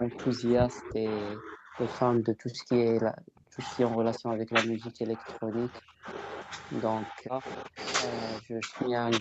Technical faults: speech suppressed in double talk; echo leak

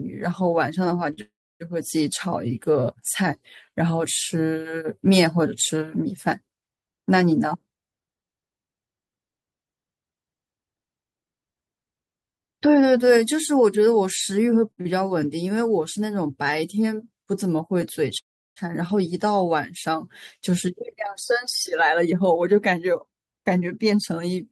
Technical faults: short stall from a late packet; call audio freeze; jitter buffer speed-up

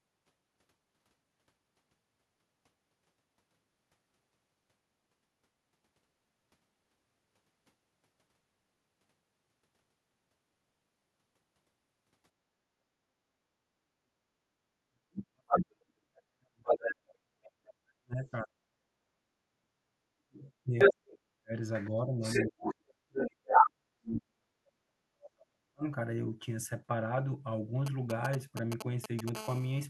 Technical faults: background gated by the echo canceller; speech suppressed in double talk; other side's voice leaking through; GSM signalling bursts; GSM phone buzz

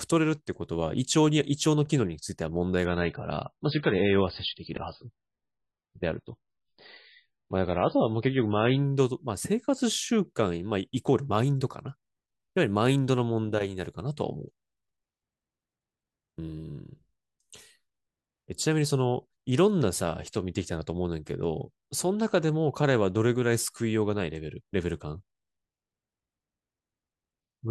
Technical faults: adaptive stream at a lower bitrate

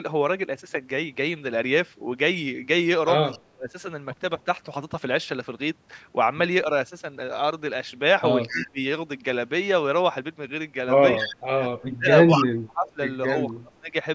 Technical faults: echo leak; speech suppressed in double talk

